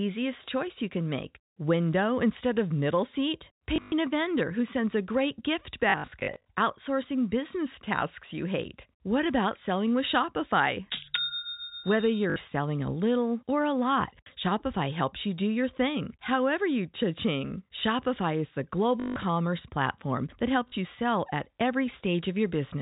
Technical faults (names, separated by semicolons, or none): packet loss with last packet repeated